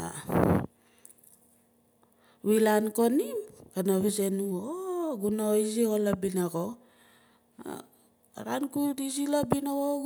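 No technical faults can be heard in this speech recording, so there are none to describe in time order.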